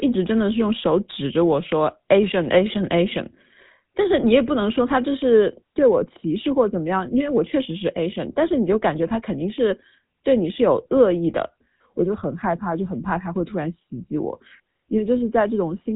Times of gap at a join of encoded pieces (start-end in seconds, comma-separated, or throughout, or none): none